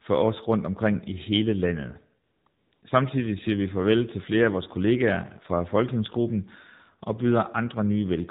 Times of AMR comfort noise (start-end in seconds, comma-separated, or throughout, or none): 2.26-2.82